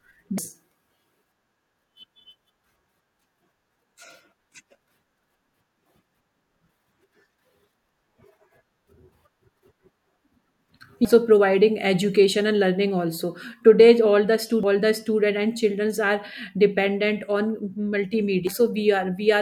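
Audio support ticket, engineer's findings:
Damaged data in a compressed stream. Corrupt bytes in the encoded speech stream; decoder misparses the affected frames, loses frame sync, then rescans for the next valid header. Audible as brief chirp, squawk, click or short-hole blips at 0.38 s, 11.05 s, 14.63 s and 18.47 s, each momentary. Isolated, irregular spacing points to sporadic corruption in storage or transport upstream of the decoder rather than a decoder fault; check source file integrity and delivery path.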